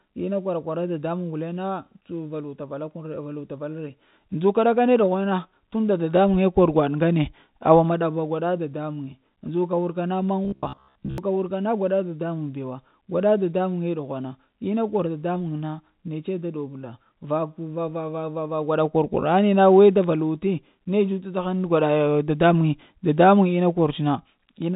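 Robotic sound from repeated short buffers runs from 10.45 to 11.18 s, between "muŋe ndzuka wurka na" and "wurka na". The likely cause is audio arriving too seldom, so the player keeps looping its last fragment while most of the real audio, roughly two thirds or more, is lost. The loop imposes a steady buzz near 67 Hz, which fits a buffer of about 15 ms. The speech becomes a rigid metallic drone within the telephone band, which stops at 4 kHz.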